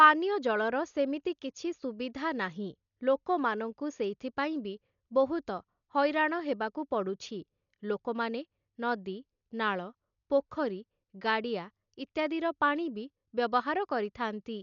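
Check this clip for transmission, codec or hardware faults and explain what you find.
One codec fault runs through the whole clip. Throughout, the speech was likely squeezed by heavy Dolby Digital compression at a rate that fits about 48 kbps: nothing survives above 7 kHz, and starved spectral lines are refilled with dither noise, so the speech sounds dull, with rough, fluttering noise clinging to tones.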